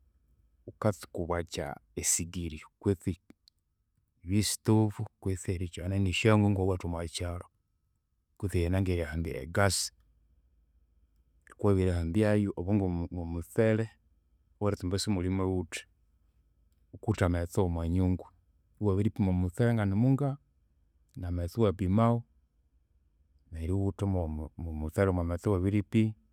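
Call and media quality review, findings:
No audible transmission or processing faults were found in the speech signal, so no component or mechanism is implicated.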